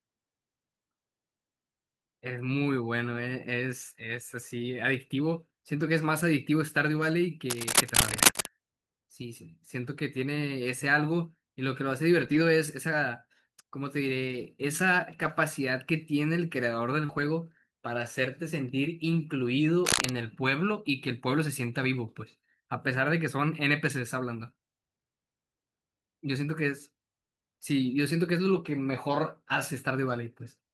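From 7.5 to 8.49 s there's a rough, uneven burst of scratching and rustling sitting about 5 dB above the speech for roughly a second. That's cable scratch noise, most likely a worn cable or connector being moved so its contact resistance jumps around and sprays noise into the signal. The same scratchy texture comes back, shorter, from 19.85 to 20.12 s, again louder than the speech underneath.

Between those, you get three patches where the speech turns grainier and noisier without ever dropping out: 12.19 to 12.37 s, 14.27 to 14.45 s, and 15.09 to 15.27 s. Each rebuilds about 100 ms of audio, which fits five lost packets of 20 ms each. That's lost packets rebuilt from error correction. The following packets carried low-bitrate backup copies, and the decoder played those instead, so there's no gap, just a rougher stretch.

At 17.05 to 17.11 s there's a short concealed packet loss, a quick smear where about 40 ms of audio never arrived and the receiver stretched the preceding sound over 35 ms of it before blending back in. 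Overlapping that, from 17.09 to 17.23 s, another error-correction rebuild takes over for about 80 ms, so the roughness carries on a bit past the smear.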